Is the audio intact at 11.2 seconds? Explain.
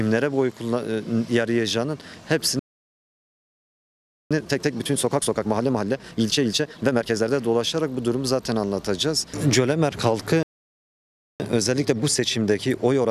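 No. At 11.2 seconds the audio is inside a playback stall that runs from 10.43 to 11.40 seconds. The sound cuts off in mid-flow and the output stays silent for about 0.97 seconds. It then starts again. The likely cause is the player running out of buffered data, or its playback thread being blocked, so nothing reached the output until it recovered. The gap is long enough to be heard plainly as a dropout.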